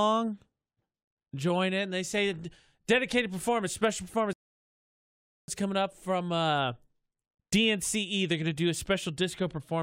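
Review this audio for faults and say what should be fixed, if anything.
A rebuffering stall occurs from 4.33 to 5.48 s: the player exhausted its downloaded audio and paused until more data arrived. The speech drops to silence for about 1.15 s, then resumes exactly where it stopped, losing nothing but adding that time. A larger playback buffer or adaptive bitrate switching would prevent it.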